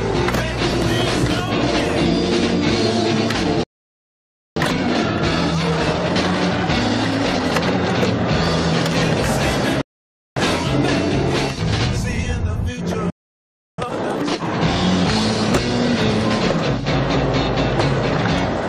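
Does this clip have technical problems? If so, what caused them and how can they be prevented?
Yes. The audio cuts to silence from 3.63 to 4.56 s, a gap of about 0.93 s, and again from 13.10 to 13.78 s, about 0.68 s, before it carries on. These are playback stalls. The likely cause is that the player ran out of data or its output thread was blocked, so nothing reached the output until it recovered. A larger playback buffer and an output thread that other work cannot block would prevent them.

Right after each stall the sound is hurried but keeps its normal pitch. It runs at 1.25 times normal speed from 4.56 to 7.56 s, and at twice normal speed from 13.78 to 14.44 s. This is time-compressed catch-up. The player works off the backlog built up during the gap by cutting out small pieces of audio and cross-fading the joins, which shortens the material without shifting its pitch. Preventing the stalls removes the need for catch-up, and capping the catch-up speed keeps it less noticeable.

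From 9.81 to 10.37 s the sound stops and then resumes exactly where it left off, adding about 0.55 s to the running time without losing anything. This is a rebuffering stall. The player used up all the audio it had downloaded and had to wait for more to arrive before it could continue. A deeper download buffer, or a lower streaming bitrate when the connection is slow, would prevent it.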